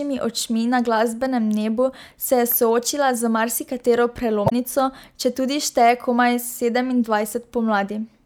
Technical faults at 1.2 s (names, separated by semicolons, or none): none